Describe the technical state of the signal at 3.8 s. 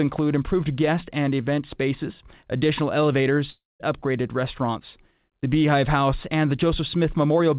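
At 3.8 s the signal is near-silent, right at the tail of a gap that opens at 3.5 s after "and event spaces additional". The last sound there smears into a fading buzz before dying away, and audio returns at 3.83 s with "upgraded restaurants", with a stretch of about 0.3 s never heard. This is a long network dropout, likely from packets that stopped arriving. The receiver stretched out the final sound to cover the gap, then fell silent until the stream resumed.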